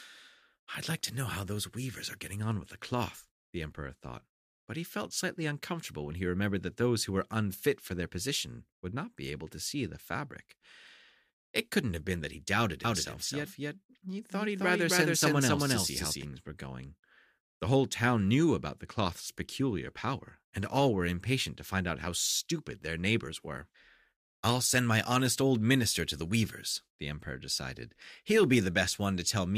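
A slower second capture path likely mixes the audio in twice from 12.85 to 16.23 s: a doubled audio track, about as loud, trailing roughly 300 ms, cutting in and out abruptly.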